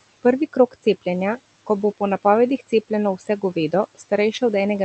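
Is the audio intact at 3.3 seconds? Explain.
No. Between 3.18 and 3.43 s the speech sounds swallowed and faint, dipping by about 10 dB for roughly a tenth of a second: speech cut by the noise suppressor, which mistook it for background noise.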